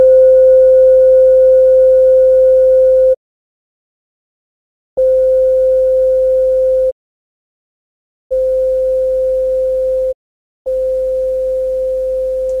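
Digital broadcast dropout mutes the audio three times, at 3.13–4.99 s, 6.89–8.33 s and 10.11–10.68 s: the receiver lost valid frames, fading out over about 20 ms, and that programme never returns.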